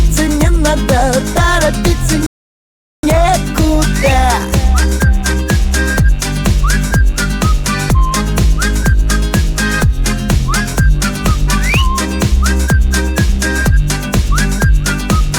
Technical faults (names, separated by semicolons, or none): rebuffering stall